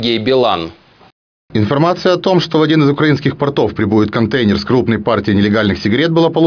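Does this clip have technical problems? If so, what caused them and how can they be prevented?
No, there are no audible technical faults to diagnose here, so no cause or preventive measure applies.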